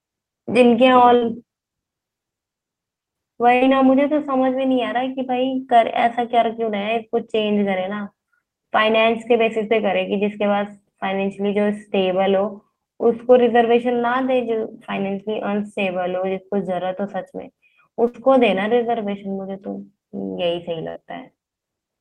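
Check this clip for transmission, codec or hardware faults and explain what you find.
The speech has four bursts of packet loss, at 1.15, 3.55, 18.07 and 20.90 s. Consecutive packets never arrived in time. The receiver held the last sound for about 60 ms, fading it out. Then about 60 ms of speech is skipped.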